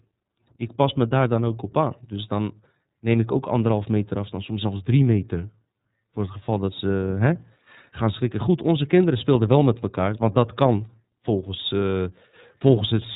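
Speech, coded with the iLBC codec for its entire length, and the damage is plainly audible. The band stops sharply at 4 kHz, leaving the voice muffled and telephone-like, and a rough, slightly synthetic quality runs through it. iLBC codes each 30 ms frame's excitation independently. The coarseness fits the 13.33 kbps mode, which pairs with 30 ms frames.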